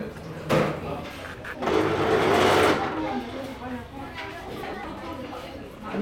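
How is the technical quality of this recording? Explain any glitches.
The recording has two glitches, both frames out of order: from 1.34 to 1.55 s and from 4.63 to 4.84 s. In each, two adjacent blocks of about 104.5 ms, which fits runs of four frames, were decoded in swapped order. The stretch plays back-to-front in halves, giving a garbled flutter. Unlike a dropout or repeated frame, nothing is missing or duplicated, and the timing stays intact.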